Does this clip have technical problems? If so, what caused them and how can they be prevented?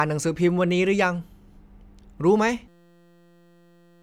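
Yes. At 2.68 s the speech gives way to a system hang loop that runs to the end: a 5.8 ms slice repeats exactly, producing a steady 172 Hz buzz, which fits a 256-sample buffer cycling while the driver froze, and about a second and a half of audio never arrives. Running capture on a dedicated real-time thread with a watchdog that mutes output on a stall should prevent it.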